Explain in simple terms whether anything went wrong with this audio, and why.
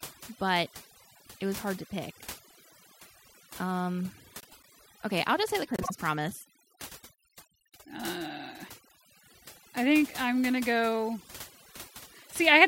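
A noise reduction tool was set far too strong across the whole recording. This is overdone noise removal: it shut off any frequency band that looked like background noise, taking quiet parts of the speech with it. The background drops and breaks up into twinkling, warbling specks.

Twice, short runs of audio frames were played in the wrong order. These are frames out of order. From 4.40 to 4.65 s, just before "okay I'll just say", two chunks of about 0.1 s each swap places. From 5.76 to 5.91 s, two chunks of about 0.05 s swap. Each spot sounds like a brief garbled flutter, but no time goes missing.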